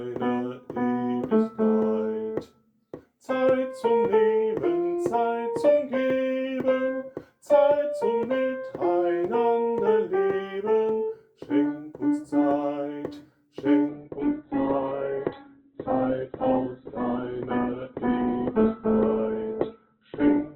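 At 13.89 s the quality drops abruptly and stays degraded to the end, with no gap or dropout at the switch. This is an adaptive stream at a lower bitrate: the player moved to a leaner encoding after the connection slowed. Nothing is left above 4.2 kHz, so the treble is gone and the sound turns dull, with coarser codec artefacts. This fits a step down from roughly 64 kbit/s Opus to about 8 kbit/s.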